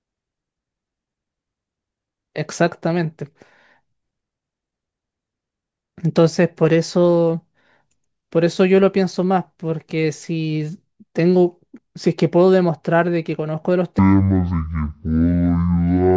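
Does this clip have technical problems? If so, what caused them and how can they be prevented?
Yes. From 13.99 s to 16.17 s, a wrong sample rate fault appears. The speech drops 12 semitones, a full octave, and runs at half speed. That fits 32 kHz audio played at 16 kHz without conversion. Resample or match rates before playback.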